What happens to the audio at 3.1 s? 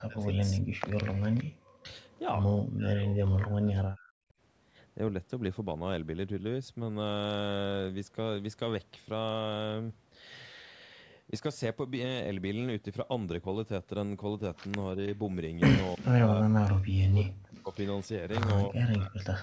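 The speech dips and breaks up in pieces from 2.65 to 4.31 s, falling by as much as about 40 dB. This is likely speech suppressed in double talk: the echo canceller, unable to separate this talker from returning loudspeaker echo, turned both down.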